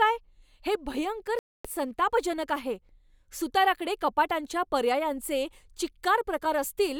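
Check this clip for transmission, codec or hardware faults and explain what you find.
One transmission fault stands out in this speech: a dropout from 1.39 to 1.68 s, likely a Bluetooth stall. The receiver's buffer ran empty while delayed packets were resent, leaving 256 ms of silence. The waveform goes flat and the spectrogram shows a blank vertical band before the speech resumes.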